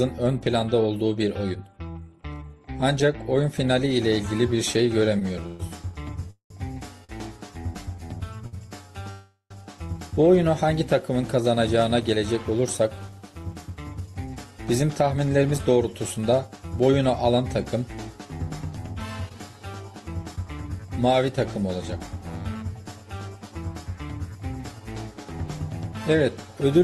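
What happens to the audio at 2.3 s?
Nothing goes wrong at 2.3 s: the audio continues intact through the WebRTC call path, with only the steady coding noise and the top-end limit near 12 kHz that the Opus codec imposes throughout.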